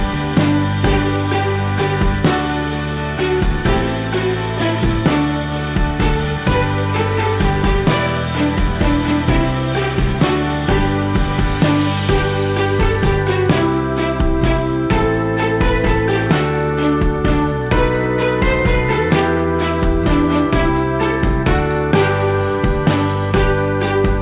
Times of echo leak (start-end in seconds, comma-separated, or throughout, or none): none